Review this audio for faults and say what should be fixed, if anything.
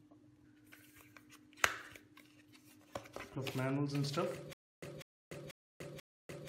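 From 4.53 s to the end, a stutter with silent gaps. A 197 ms burst repeats four times, each followed by 292 ms of digital silence, so it returns every 489 ms. The likely cause is a stalled stream replaying its last fragment on each retry. The audio meant for that stretch is lost. Prevent this by buffering more audio ahead of playback, so a stall never empties the buffer.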